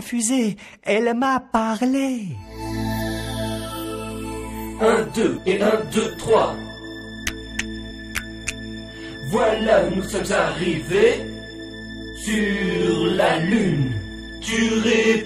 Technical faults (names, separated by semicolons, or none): damaged data in a compressed stream